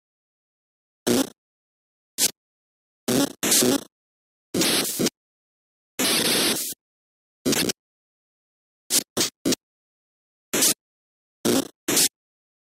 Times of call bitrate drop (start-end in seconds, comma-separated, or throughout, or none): none